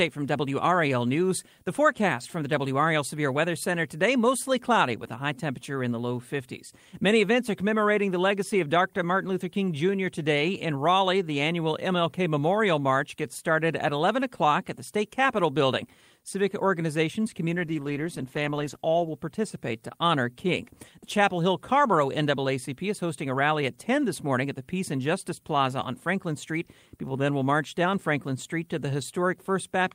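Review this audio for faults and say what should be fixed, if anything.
From 17.55 to 19.19 s, just before "participate to honor", the speech turns coarse and watery, and the top end dulls for about 1.6 seconds before clarity returns. This is a call bitrate drop. The falling bandwidth estimate made the encoder spend far fewer bits, which fits a fall from about 40 to 15 kbps. Unlike packet loss, nothing drops out or stutters. The sound stays continuous but degraded and then recovers. To prevent it, tune the congestion controller to ramp down more gently and keep a higher minimum bitrate for speech.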